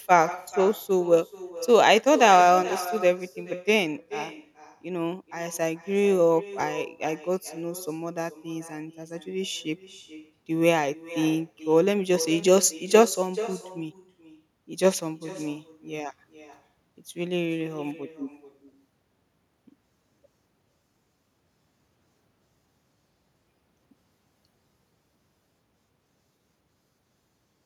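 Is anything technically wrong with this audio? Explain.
Yes, there's echo with no canceller running through the whole clip. Every phrase of the speech is followed, around 0.4 s later, by a fainter copy sitting about 16 dB down. The far end is playing the call over a loudspeaker, their microphone is catching it, and nothing is subtracting that signal before it's sent back, so the talker hears themselves after the network round trip. The returning copy sounds thin, like a ghost trailing each phrase.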